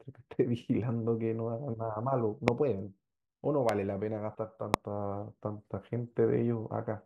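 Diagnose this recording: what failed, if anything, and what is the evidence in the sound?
Loud pops at 2.48, 3.69 and 4.74 s are single thumps about 20 to 25 dB above the speech. The speech continues beneath them with no gap, which rules out dropouts. The cause is likely voltage pulses in the analogue wiring.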